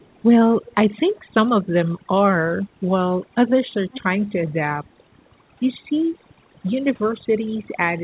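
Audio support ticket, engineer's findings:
Overdone noise removal, whole clip: background pulled to near silence with twinkling specks. The suppressor is set too aggressive, gating bands near its noise estimate. Spectrogram shows isolated dots in the gaps and ragged, holed speech harmonics.

Echo leak, 0.02–0.22 s, 0.65–0.75 s and 3.92–4.01 s: a delayed copy of the speech trails the original by about 0.39 s. It is very faint at first, faint in the second event and strongest by the third. The likely cause is a far-end speakerphone echo canceller leaving residual. The waveform shows low ghost bursts offset 0.39 s from the speech peaks. The spectrogram shows a faint repeat of the speech pattern.

Note: spectrum stops at 4 kHz across the clip, which fits G.711 mu-law at 64 kbps on the call path.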